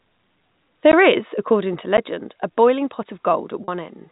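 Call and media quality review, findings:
Block of digital silence, 0.92 s: sound drops to silence for about 14 ms just before "is according to", heard as a short tick-hole. Probable component: audio output path. The playback buffer was not filled in time, so zeros went out with no fade.

Block of digital silence, 1.97 s: same symptom, about 10 ms, between "is according to" and "a boiling pot". The duration differs but the sharp edges are the same, pointing to the same recurring buffer underrun.

Packet loss with pitch repetition, 3.64 to 3.68 s: right after "a boiling pot", the voice briefly holds a buzzy, slightly frozen tone for about 40 ms before speech resumes. Probable component: receiver jitter buffer and concealment. Packets were lost in transit (the gap fits two 20 ms packets), and the decoder bridged it by repeating the last pitch period. The loss is too short to fade to silence, so it is heard as a held note rather than a drop. 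The G.711 A-law path carrying the call shows nothing beyond its usual narrow telephone band.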